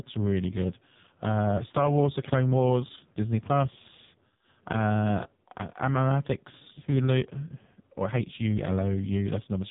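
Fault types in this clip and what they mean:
AMR narrowband mobile codec: speech rebuilt by a pulse-driven vocal-tract model, heavily buzzy and synthetic as at a very low bitrate; spectrogram blank above 3.8 kHz.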